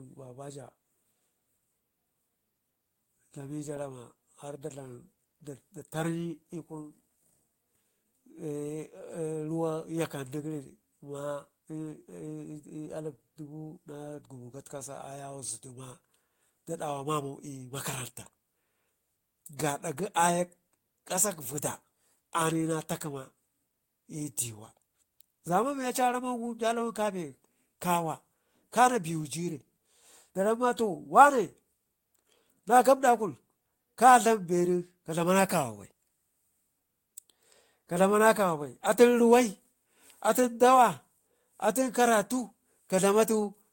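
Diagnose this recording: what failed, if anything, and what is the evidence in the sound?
Nothing failed: no fault is audible anywhere in the speech recording, so there is nothing to trace to any stage of the signal chain.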